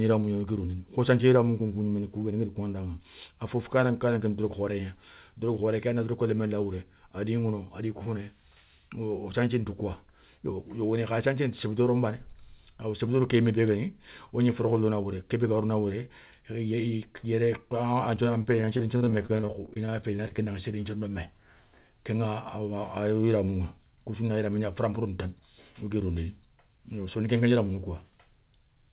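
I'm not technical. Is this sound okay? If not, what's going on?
No. From 18.42 to 20.40 s the speech breaks up with repeated packet loss, which makes it sound robotic. Pieces of audio went missing about twenty times, each under 0.04 s. Each hole was patched by stretching the last sound, so it turns choppy. The call line also carries nothing above 4 kHz, which makes it sound like a phone.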